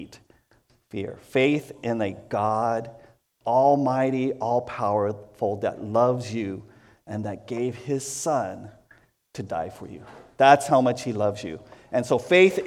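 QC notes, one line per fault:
No faults found; nothing to log.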